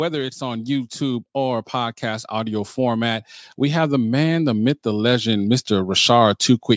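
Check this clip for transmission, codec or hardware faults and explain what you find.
One fault stands out, an automatic gain rising across nearly the whole clip. From 0.38 s to 6.46 s the speech and the background noise swell together, growing steadily louder by about 13 dB rather than jumping. The call's automatic gain control judged the incoming level too quiet and raised its gain gradually, so everything in the signal was lifted at once. The call microphone processing trims the lowest bass and leaves nothing above 8 kHz, which is expected for that path.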